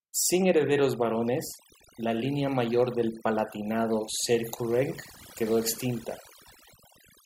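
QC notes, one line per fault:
Throughout, overdone noise removal: the noise reduction was pushed too hard on this speech, so any frequency band that dips near the tool's noise estimate gets pulled right down or switched off. The quiet edges of the voice fall into that range too and vanish with the noise. What's left between phrases is near silence dotted with little twinkly specks.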